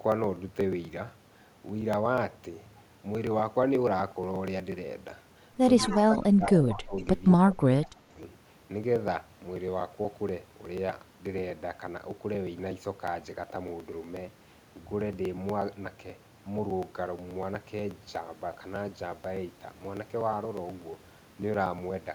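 Periodic USB or driver dropouts run from 0.12 s to 22.03 s: roughly every 0.121 s a few milliseconds of speech, around 4 ms, vanish outright, with the gap simply skipped, not filled with silence. Something is stalling the USB link or audio driver on a fixed schedule, so the stream loses a small slice each cycle. Across about two hundred occurrences this produces a steady, evenly spaced ticking that is audible only where speech is present.

Echo leak appears at 5.77 to 5.98 s, again at 6.98 to 7.02 s, and at 7.82 to 7.89 s, each a copy of the voice played on the other end's loudspeaker trailing by 186 ms. It is most prominent in the first instance, at about 15 dB below the speech, and much fainter later, at about 35 dB and 30 dB down. The likely cause is a loudspeaker on the other end whose echo canceller let part of the microphone pickup through and back down the line, heard as brief, delayed scraps.

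Speech suppressed in double talk overlaps those echo moments, from 5.88 to 6.95 s and from 7.47 to 8.12 s. The talker's level sinks by up to about 20 dB in the first span and about 25 dB in the second, totalling around a second and half a second of affected speech. This is likely an echo canceller failing to tell the local talker from loudspeaker echo while both sides spoke, so it attenuated everything, making the speech dip.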